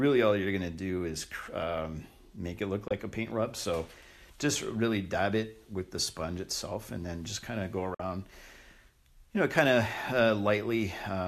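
Brief holes open in the sound from 2.88 to 2.91 s and again, roughly twice as long, from 7.94 to 8.00 s, each dropping to silence through a 3 ms fade. This is digital broadcast dropout: the receiver muted over failed frames, losing 24 ms and then 48 ms, which fits one and two 24 ms frames.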